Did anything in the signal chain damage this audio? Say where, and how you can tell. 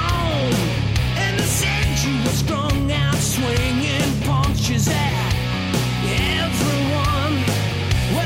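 Yes, at the sample-format conversion stage. From 5.77 s to the end, a gritty, inharmonic fizz rides on the louder and brighter parts of the sound. This is crude rate conversion. Samples were picked by nearest neighbour with no filtering, which fits a 48 kHz to 44.1 kHz change, and the repeating pick pattern sits roughly 25 dB below the signal. Clipping or overload adds harmonics. This added tone is unrelated to the pitch and starts abruptly.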